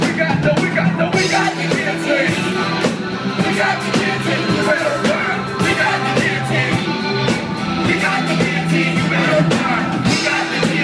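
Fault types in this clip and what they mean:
There are no fault types in this clip, so there is nothing to explain about what they mean.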